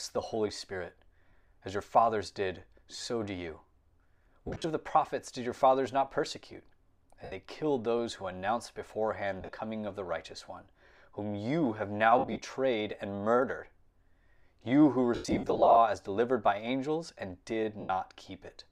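Lost LE Audio frames occur at 1.28, 2.96, 4.47 (just before "of the prophets did"), 7.24, 9.41, 12.19 (after "whom you have now"), 15.15 to 15.77 s (the longest, about 0.4 s lost in runs up to about 100 ms), and 17.80 s (after "delivered by angels and"). Each gap is filled with a noisy, smeared copy of the preceding spectrum that fades rather than cutting straight to silence or repeating cleanly, which fits 7.5 ms frames concealed by the decoder. Only a faint grain, likely from light LC3 coding, underlies the speech.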